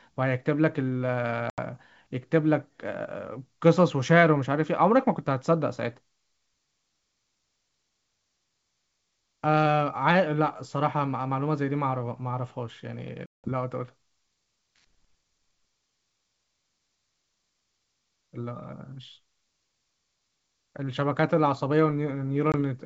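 Packet loss on an ADPCM call hits the speech three times: about 80 ms of audio goes missing at 1.50 to 1.61 s, about 180 ms at 13.26 to 13.53 s, and about 20 ms at 22.52 to 22.55 s. The lengths suggest a few packets, about ten, and a single one. Each gap drops abruptly to silence. When audio returns, the receiver's adaptive predictor and step size no longer match the sender's, so the sound comes back with brief distortion before the G.722 decoding (64 kbit/s) regains sync.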